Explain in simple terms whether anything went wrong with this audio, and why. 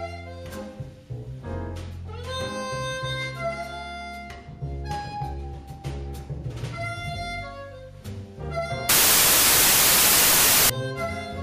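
Something went wrong from 8.89 to 10.70 s: samples built from the wrong bytes. The playback read each sample's bytes in the wrong order or position, so the tiny, fast-changing detail became the main value. The result is a burst of loud hiss, like static, covering the sound.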